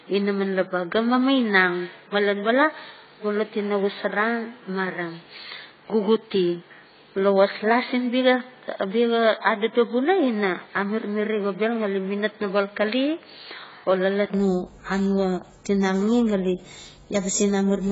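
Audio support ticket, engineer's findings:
Throughout: dull, smeared audio, nothing above 7.7 kHz, heavy codec damage. Likely cause: AAC compression (AAC-LC) at a low bitrate, consistent with about 16 kbps. Too few bits force a lowered cut-off and coarse quantisation of spectral lines.

0.0 to 14.34 s: narrower band, nothing above 4.5 kHz, own noise floor roughly 50 dB below signal, no clear level jump. Input switched to a poorer device, likely. 80 ms silence at the 14.34 s switch, then wider band returns.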